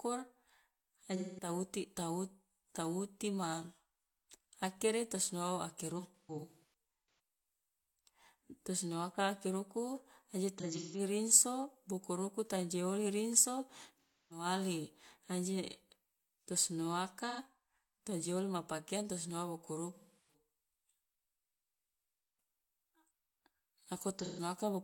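At 14.02 s the speech hits AAC frame loss with concealment, lasting until 14.45 s. About 0.3 s of coded audio never reaches the decoder, which points to a run of several lost frames. The decoder fills the hole by reusing the last good spectrum with randomised detail. The sound turns smeared and noisy, with a hollow, phasey quality.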